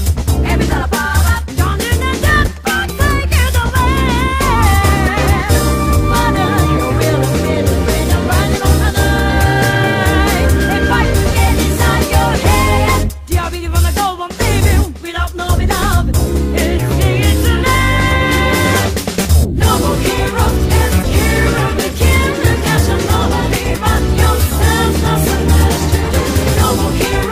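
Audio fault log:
No fault found in this audio.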